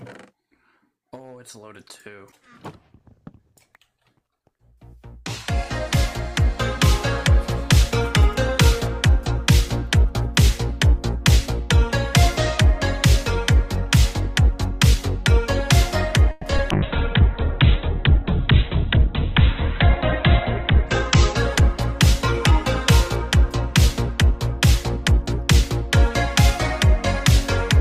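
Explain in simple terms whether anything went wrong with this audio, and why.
Several things go wrong in the second half, all clustered from about 16.3 s onward.

At 16.31 s the sound stalls for about 0.14 s, stretching into a brief fading buzz or hiss before carrying on. That is a call audio freeze. Its likely cause is delayed packets leaving the receiver's buffer empty, so it padded the wait with a continuation of the last sound. Nothing is lost, just a short pause inserted.

Right after, at 16.57 s, there is a tiny smear or wobble lasting about 0.03 s. This is short concealed packet loss: a sliver of audio never arrived in time, and the receiver papered over the hole by extending what came just before, then blended back.

From 16.71 s to 23.16 s the sound turns muffled and rough, as though heard through a phone line, with nothing above about 4 kHz. This is a call bitrate drop. The connection looked weaker, so the encoder squeezed the audio much harder and trimmed the treble until conditions improved.

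Finally, from 23.36 s to 25.53 s the audio runs about 3% fast without any change in pitch. This is a jitter buffer speed-up. Too much audio had piled up, so the receiver snipped out tiny pieces, roughly 70 ms in total, to catch up.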